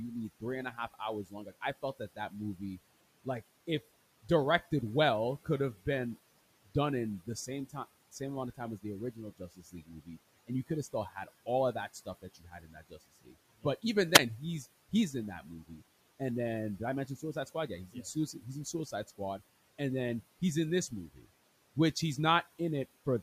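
From 0.4 to 2.79 s, speech cut by the noise suppressor makes soft consonants and word tails sink by up to about 15 dB, for perhaps 0.4 s in total. The suppressor is treating low-level speech as background and pulling it down with the room noise that sits about 21 dB under the voice. The same swallowed, faint quality returns at 7.26 to 7.75 s (about 13 dB) and, most heavily, across 8.57 to 13.84 s, where roughly a second and a half of speech drops by up to about 18 dB.

At 14.14 s comes a wireless microphone squelch dropout lasting about 50 ms. The radio signal fades, hiss swells briefly, and the receiver's squelch mutes the output for about 8 ms before the voice returns. The burst of static before the gap sets it apart from the suppressor's cuts, which never add noise and only dim the quieter parts of speech.

The suppressor cuts continue at 14.89 to 15.82 s, just before "and then" (about 13 dB), at 16.79 to 17.55 s (about 9 dB), at 17.87 to 19.41 s, ahead of "and then he's in" (about 13 dB), and at 20.89 to 21.27 s, between "then he's in this" and "which he's" (about 10 dB).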